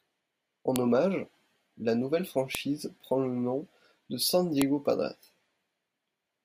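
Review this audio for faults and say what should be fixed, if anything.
File header played as audio: sharp snaps at 0.76 s (before "hommage la nouvelle"), 2.55 s (before "prend le nom de") and 4.62 s, where header bytes were decoded as samples. Each appears as a near-vertical broadband line on a spectrogram and a lone spike in the waveform. Strip each WAV header before joining or streaming the pieces.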